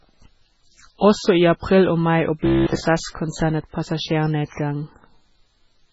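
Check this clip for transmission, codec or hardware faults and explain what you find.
Two faults are audible: heavy codec damage across the whole clip and a robotic buzz in one short stretch of the speech.

MP3 compression, throughout: likely a very low bitrate, around 16 kbps. Weak frequency lines drop in and out, giving a watery, swirly sound, and nothing is heard above 7.6 kHz.

Robotic sound from repeated short buffers, 2.46 to 2.80 s: likely late audio being filled by replaying about 15 ms repeatedly. This makes a rigid metallic buzz at 66.7 Hz across most of that stretch.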